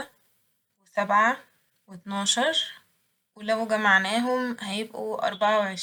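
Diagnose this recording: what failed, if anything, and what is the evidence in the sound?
Nothing failed at any stage from capture through playback, and there is no audible evidence of a fault anywhere in the speech.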